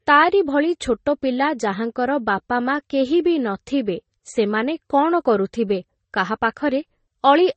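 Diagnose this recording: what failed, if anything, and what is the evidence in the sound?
Codec stage: the speech has nothing above 8.4 kHz throughout, with layered, mismatched coding artefacts, likely transcoding between lossy codecs, consistent with low-bitrate MP3 re-encoded to Vorbis.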